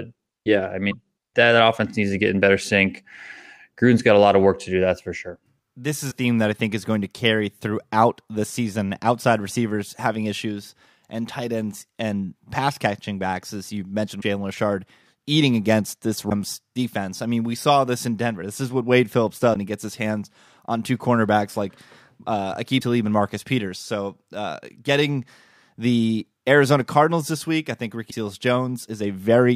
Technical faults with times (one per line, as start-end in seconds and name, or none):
0.90-0.93 broken MP3 bit reservoir
6.10-6.13 broken MP3 bit reservoir
14.20-14.23 broken MP3 bit reservoir
16.29-16.32 broken MP3 bit reservoir
19.53-19.56 broken MP3 bit reservoir
22.79-22.82 broken MP3 bit reservoir
28.10-28.13 broken MP3 bit reservoir